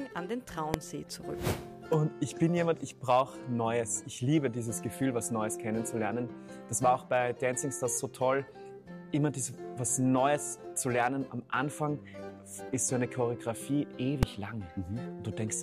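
At 0.74 s and 14.23 s, invalid numbers at full scale turn blocks of about 0.73 ms and 2.9 ms into maximum-level values. Each is heard as one harsh bang, far louder than an ordinary click.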